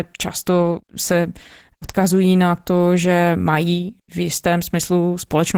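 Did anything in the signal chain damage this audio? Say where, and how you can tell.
Yes, at the codec stage. The whole clip passed through Opus voice compression, and the damage is plainly audible from start to finish. The artefacts fit Opus running in hybrid mode at roughly 16 kbps with 20 ms frames. Here SILK's linear-prediction coder handles the speech band up to 8 kHz, and a thin CELT layer covers the top. At that rate the excitation is coded coarsely, so the speech sounds hoarse and faintly synthetic.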